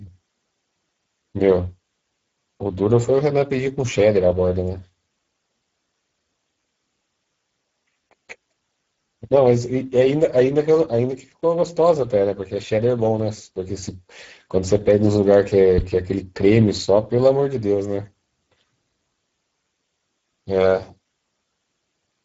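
Throughout the speech, Speex codec damage is plainly audible. The CELP coder has too few bits to model the excitation, so the speech sounds noisy and hoarse, which fits a rate near 10 kbps. Nothing remains above 7.7 kHz.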